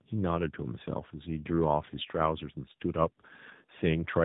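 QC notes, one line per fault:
Throughout, tandem speech coding: the speech sounds rougher, more muffled and more warbly than a single narrowband coder would leave it, with nothing above about 3.8 kHz. The character fits two passes through AMR-NB at around 10.2 kbit/s with a G.711 mu-law link between them. The second coder re-encodes audio already stripped and distorted by the first, so its errors stack on top of the earlier ones.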